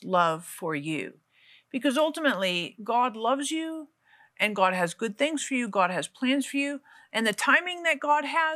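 Listening through this speech recording, nothing stood out as a technical problem at any point.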